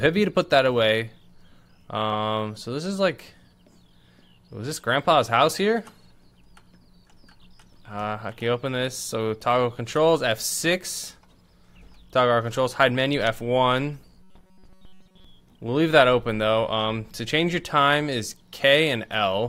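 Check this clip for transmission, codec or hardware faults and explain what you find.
One fault turns up, from 14.23 to 15.25 s: robotic sound from repeated short buffers. Audio likely arrived too seldom, so playback kept repeating a slice of about 5.3 ms while most of the real audio was skipped, forcing a rigid metallic buzz at 188 Hz.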